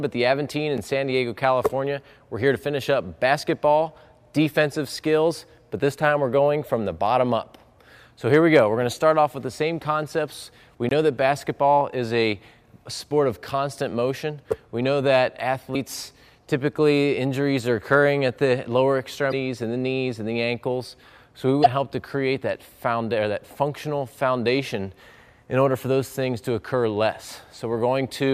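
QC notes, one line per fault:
0.77 s and 10.89–10.91 s, block of digital silence: the audio cuts out with no fade. The 5 ms gap sounds like a tick, and the 21 ms gap like a short hole. These lengths fit 256-sample and 1024-sample output buffers, left unfilled in time or filled with invalid values.
15.72–15.76 s, 19.29–19.34 s and 21.62–21.67 s, damaged data in a compressed stream: each is a brief disturbance lasting 42 to 46 ms, where corrupted frames make the decoder misread them and lose sync.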